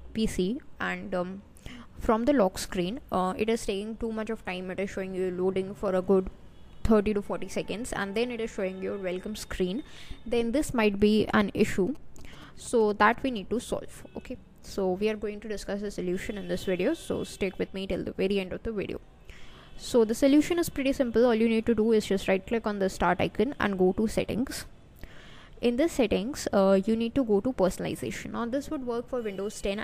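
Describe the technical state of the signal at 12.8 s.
At 12.8 s the signal carries GSM signalling bursts, running from 11.87 to 13.62 s. A nearby 2G phone is exchanging short radio bursts. The audio circuit rectifies them. The result is a galloping dit-dit-dit of short 217 Hz buzzes, well below the main sound.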